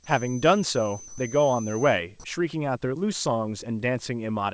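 Right from the start, 0.0 to 2.0 s, there's a thin, steady whistle at about 6.1 kHz sitting roughly 20 dB under the speech and swelling and fading slowly in level. That's a feedback whistle. The likely cause is the loudspeaker-to-microphone loop hovering just at the edge of feedback, so that one frequency keeps ringing without ever running away into a full howl. It rides on top of a band that stops at 8 kHz, which fits G.722 on the call path.

Inside that stretch, from 1.08 to 1.18 s, the background drops out for about 100 ms and is replaced by comfort noise in place of the background. For that moment the real room sound, which sits about 20 dB below the loudest speech, turns into a flat, featureless hiss about 2 dB quieter. That points to the sender likely going silent under discontinuous transmission, with the receiver filling the gap with synthetic noise shaped to the background, in the style of standard RFC 3389 comfort noise.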